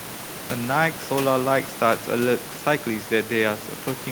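No technical faults are present.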